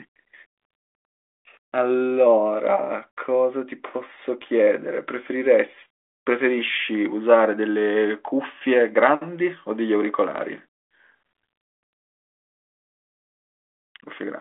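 No technical fault can be heard in this speech recording. It comes over a G.726 ADPCM link at 40 kbit/s, so it sits in the telephone band of about 300 Hz to 3.5 kHz with nothing above 3.8 kHz, and any coding hiss is faint at most.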